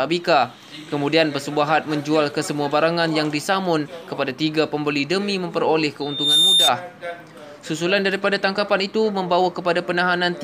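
Loudspeaker feedback squeal from 6.01 to 6.71 s: a microphone picks up its own loudspeaker, and at 3.6 kHz the loop gain exceeds one. The tone swells over roughly a third of a second into a piercing squeal standing about 5 dB above the audio.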